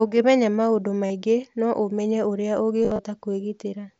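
Concealed Bluetooth headset packet loss at 1.07 to 1.10 s, and again from 2.83 to 3.04 s: packets between headset and phone dropped, so the receiver patched each gap by repeating recent waveform. That turns the gaps into a brief buzzy, held tone with a slight warble as real sound resumes.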